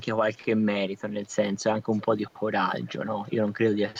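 Echo leak occurs in this speech at 0.37–0.45 s, 1.92–2.05 s, 2.83–2.93 s, 3.25–3.35 s and from 3.74 s to the end. Each time, a brief delayed copy of the voice trails the original by about 330 ms. The first is very faint, the middle three sit about 25 dB below the speech, and the last rises to about 20 dB down. The likely cause is a loudspeaker at the other end whose echo canceller let part of its microphone pickup return down the line.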